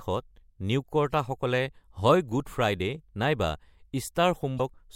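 Right near the end of the speech, at about 4.56 s, there's a quick glitch lasting roughly 40 ms, and it's damaged data in the compressed stream. A short run of the encoded data went bad, so the decoder misread those frames, lost its footing and had to hunt for the next valid frame header before it could carry on. What you hear is a brief blip that breaks off and ends by 4.60 s.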